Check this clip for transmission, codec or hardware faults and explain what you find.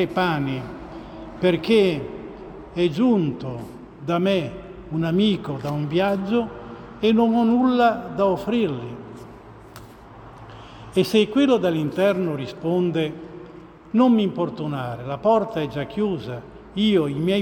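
No faults detected.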